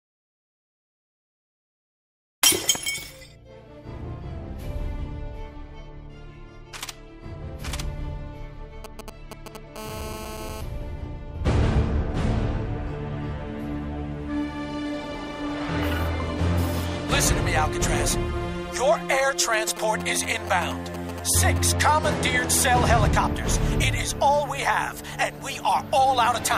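From 8.84 to 9.57 s come GSM signalling bursts. A nearby 2G phone sends brief clusters of radio bursts, and the audio circuit rectifies them. The result is a galloping dit-dit-dit of short 217 Hz buzzes, roughly 10 dB below the signal.

At 9.76 s a GSM phone buzz takes over and runs to 10.61 s. The phone is now transmitting continuously, as in a call, pulsing 217 times a second. The rectified pulses give a hard, raspy 217 Hz buzz, rich in harmonics, about 11 dB below the signal.

From 19.54 to 22.14 s the GSM signalling bursts return. The same galloping brief 217 Hz buzzes recur at a similar level.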